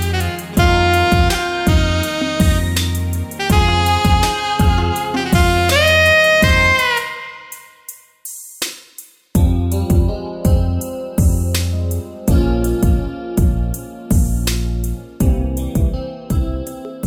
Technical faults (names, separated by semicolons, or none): none